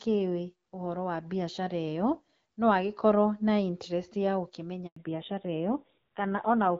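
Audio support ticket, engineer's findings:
Handover gap, 4.86 to 4.96 s: speech drops out for 100 ms while the call switches networks and no frames arrive. The waveform decays within tens of milliseconds to a flat line, and the spectrogram shows a clean vertical blank band.

Fallback to narrowband, 4.96 s to end: the sound turns duller and rougher once the link re-forms on a narrowband codec. On the spectrogram, energy stops sharply at 4 kHz, which fits a drop from AMR-WB at around 12.65 kbit/s to AMR-NB at a lower rate such as 7.4 kbit/s. Before the gap, the HD Voice content reaches well above 4 kHz.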